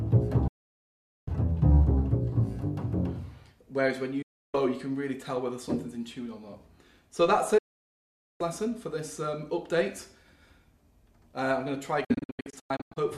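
Digital broadcast dropouts cut the sound from 0.47 to 1.28 s, 4.22 to 4.55 s, 7.58 to 8.41 s, and 12.04 to 12.97 s. Each time the receiver lost valid frames and muted with an 8 ms fade. The last dropout breaks into several short holes, the longest 96 ms.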